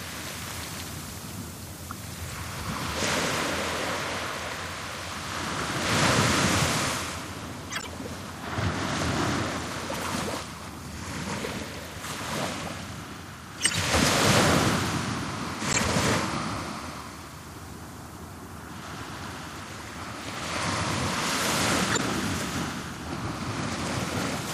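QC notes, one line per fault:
Throughout: MP3 compression. Watery, swirly texture with dulled treble and smeared attacks, likely a low bitrate around 64 kbps. It is continuous, unlike the brief isolated bursts.
7.70–7.87 s, 13.58–13.76 s, 15.70–15.79 s, 21.91–22.00 s: corrupt frame decoded. Damaged frames were played anyway, giving short chirps or noise bursts, loudest near 13.6 s, rather than steady compression smearing.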